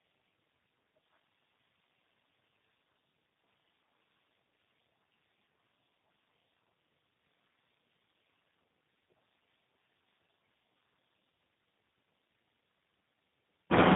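Tandem speech coding runs through the whole speech: the sound points to two speech codecs in a row, GSM full rate and then G.729A, with a clean G.711 hop between. Nothing survives above 3.8 kHz. The roughness and warble stack up beyond what either codec alone would cause.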